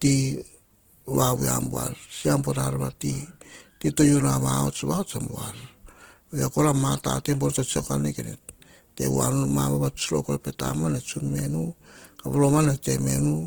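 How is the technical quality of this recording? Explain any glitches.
The technical quality is compromised by audible Opus compression throughout. The speech sounds grainy and rough rather than swirly, likely from Opus in music mode at a low bitrate near 16 kbps. Starved bands get filled with noise, and content still reaches about 20.1 kHz, so unlike MP3 it has few watery holes.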